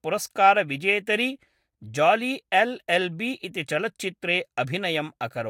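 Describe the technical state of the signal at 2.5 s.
At 2.5 s the speech signal is intact, with no audible dropout, distortion or other technical fault at that point.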